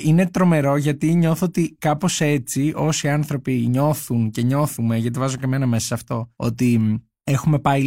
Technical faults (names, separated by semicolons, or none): none